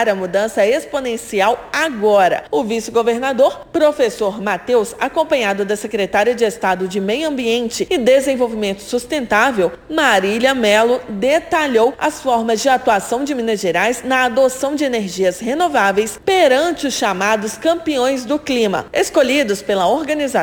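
The audio carries a crude rate conversion from start to finish: a gritty, inharmonic fizz rides on the louder and brighter passages, sitting roughly 25 dB below the signal. The pattern fits a 44.1 kHz to 48 kHz conversion done by nearest-sample picking, where samples are simply repeated at a regular cadence with no filtering. That periodic timing error produces shifted, inharmonic copies of the material, so the grit tracks level and high-frequency content rather than staying constant.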